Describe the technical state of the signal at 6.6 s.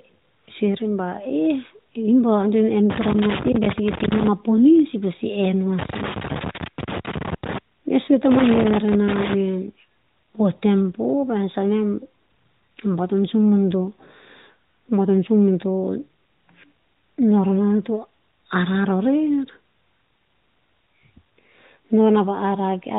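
At 6.6 s the signal is in the middle of a loose connector crackle running from 5.79 to 7.58 s. A worn or dirty contact is intermittently opening and closing as it shifts, chopping the signal on and off, heard as an irregular scratchy burst over the speech. Underneath, the band-limited AMR-NB mobile codec passes nothing above 4 kHz, its light coloration fitting the 12.2 kbps mode.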